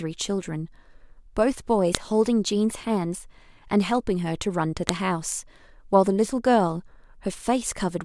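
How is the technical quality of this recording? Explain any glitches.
The recording has two sharp, loud clicks, at 1.95 s and 4.89 s. This is the file header played as audio: header bytes left where speech pieces were joined are decoded as samples, producing a snap unrelated to the surrounding speech, unlike a signal-driven pop.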